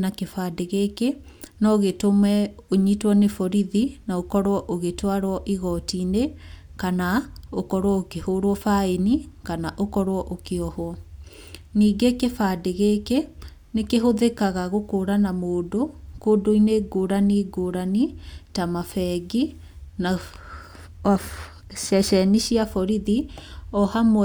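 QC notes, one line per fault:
No faults were found in this speech recording. Nothing in the audio calls for a correction.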